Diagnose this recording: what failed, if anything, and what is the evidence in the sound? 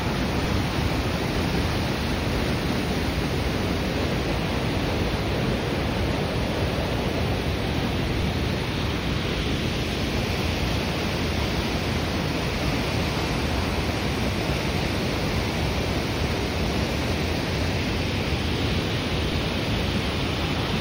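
A DC step occurs at 8.22 s and again at 19.32 s, each a low thump under the unchanged sound. At the converter or analogue input stage, the waveform's zero line jumps abruptly, by about -22 dBFS at the first event and about -24 dBFS at the second. A high-pass response near 20 Hz then pulls the offset back toward zero, so each step decays rather than holding. The sudden shift is what sounds as a thump.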